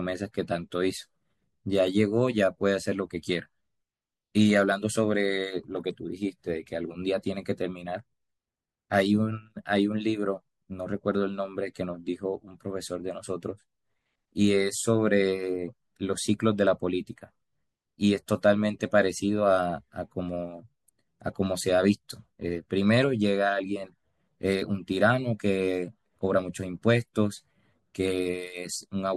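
No technical faults can be heard anywhere in the speech. Nothing here calls for a timestamp or a fix.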